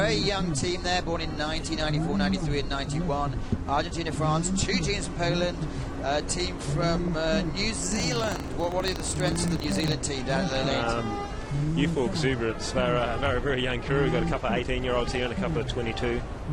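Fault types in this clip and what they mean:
DAB burbling: Weak digital radio reception lets bit errors reach the MP2 audio, making single sub-bands jump in level for a frame. It shows up at 6.73–7.08 s and 10.36–10.73 s, seen on a spectrogram as scattered rectangular patches flaring in narrow bands.
buffer tearing: The writing and reading positions of a ring buffer have crossed, so a small slice of each buffer replays audio from roughly 70 ms earlier. From 7.8 to 9.94 s this gives a 25 Hz rattling buzz, visible as evenly spaced vertical clicks and waveform steps every 40 ms.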